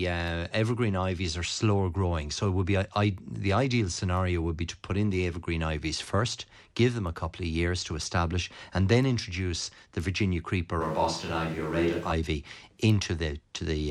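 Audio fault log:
10.82–12.11 s: switch to a distant microphone. Speech abruptly turns roomy, hollow and thin, with room noise about 25 dB down. Likely a far microphone took over.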